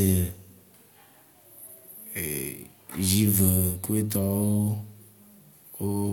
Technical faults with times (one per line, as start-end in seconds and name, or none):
none